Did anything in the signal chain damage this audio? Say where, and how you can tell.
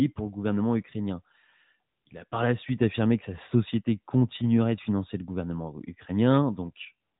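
Yes. The damage sits at the codec stage, and it runs through the whole clip: the speech has passed through the AMR narrowband mobile codec. Nothing above 3.8 kHz survives, so the voice sounds boxed-in and telephone-like, with a plainly audible buzzy, synthetic edge. That edge comes from rebuilding the vocal tract from a few pulses per 5 ms subframe, at a rate that fits about 10.2 kbps. A spectrogram shows a hard ceiling near 3.8 kHz, with empty space above it from start to finish.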